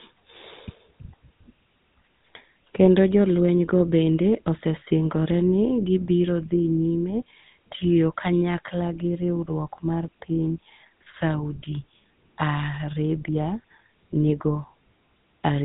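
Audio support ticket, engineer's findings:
Speech passed through GSM full-rate codec, whole clip. Vocal-tract model excited by sparse regular pulses, band capped at 4 kHz. Result: plainly audible buzzy, gravelly roughness, dull top end; consistent with the 13 kbps full-rate coder.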